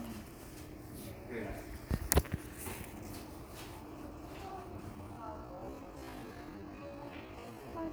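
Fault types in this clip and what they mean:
Time-stretched section: from 4.93 s to the end at 7.92 s the audio plays at half speed while its pitch stays where it was, so the pace drops abruptly and the sound drags. This is likely the work of software stretching that stretch of audio to fill a longer slot, holding the pitch steady by repeating short slices of the material.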